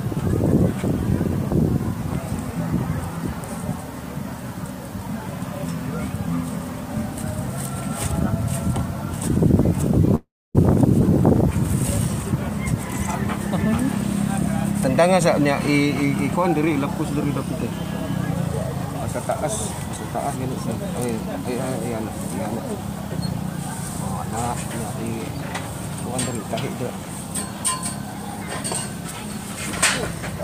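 From start to finish a constant, even hiss sits under the audio, about 25 dB below the signal. This is low bit depth with dither: the sound fits an 8-bit signal, with noise added before rounding so the rounding error turns into steady white noise. What separates it from plain low bit depth is that nothing crunches or distorts on quiet passages, and unlike background noise in a recording the hiss stays exactly uniform.

At 10.15 s the audio breaks off, and until 10.59 s the last sound carries on as a buzzy, hissing continuation that fades away, leaving about 280 ms of near silence before the audio returns. The likely cause is a long network dropout, in which roughly 400 ms of audio never arrived and the receiver filled the gap. Unlike a brief packet loss, the gap lasts long enough for the fill to die out, and the audio resumes further on without the missing section.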